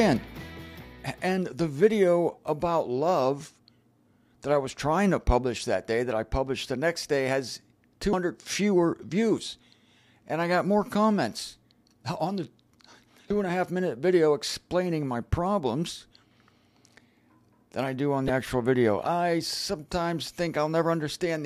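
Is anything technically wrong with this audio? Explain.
Yes. There is damaged data in a compressed stream at 8.10–8.13 s, 13.27–13.31 s and 18.26–18.30 s. Each time, corrupted bytes cause the decoder to misread frames and lose sync until it finds a valid header, producing a short chirp or blip lasting about 30 ms.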